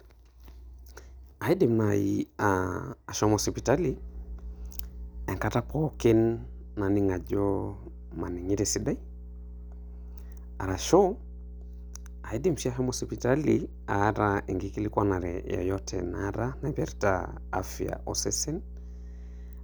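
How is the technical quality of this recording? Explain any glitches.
The recording is marred by one clear fault. Mains hum enters at 3.25 s and runs to the end. A ground loop or nearby transformer is coupling the 60 Hz power line into the signal, producing a steady low drone roughly 15 dB below the speech.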